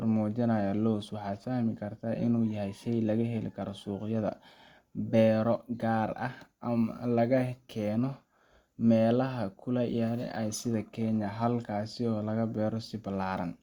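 From start to finish the speech carries a crude rate conversion artefact. Samples were linearly interpolated onto a new time grid without an anti-aliasing filter, and the mismatch pattern fits a conversion from 44.1 kHz to 48 kHz. The resulting error, roughly 40 dB below the signal, forms shifted, inharmonic copies of the voice. It is heard as a faint gritty fizz that rises on loud passages and sibilants.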